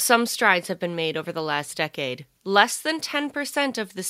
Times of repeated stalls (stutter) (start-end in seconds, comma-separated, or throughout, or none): none